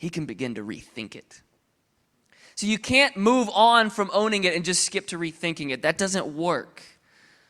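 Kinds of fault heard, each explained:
Nothing here stands out as a technical fault; the speech comes across with no glitches, dropouts or distortion to point to.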